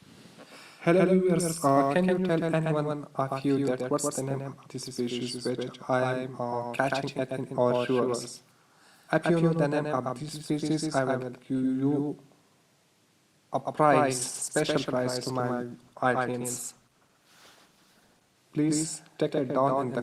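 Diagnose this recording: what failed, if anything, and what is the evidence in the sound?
At the mixing or capture stage, the audio has most likely been recorded twice, with a second copy arriving through a slower path. That gives a doubled audio track throughout: a full-band echo about 150 ms behind, roughly 5 dB quieter, with no decay or room colour.

At the network stage, the adaptive stream switched to a lower bitrate from 14.34 to 18.34 s after the connection slowed. The quality changes abruptly, with heavier codec artefacts and no gap. The change fits a fall from roughly 64 to 16 kbit/s in the Opus codec.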